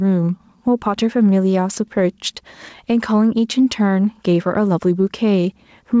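Speech carried over a call, with the top of the band stopping at 8 kHz, which fits a G.722 wideband codec, and there's gain pumping the whole way through. The swing is around 5 dB, so loud and quiet moments end up squashed together. The likely cause is mic gain set far too hot, with a fast limiter clamping down on each loud bit.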